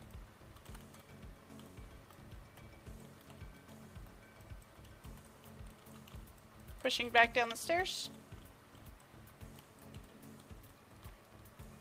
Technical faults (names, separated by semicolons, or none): none